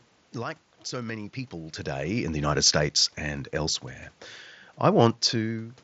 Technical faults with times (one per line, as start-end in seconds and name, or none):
none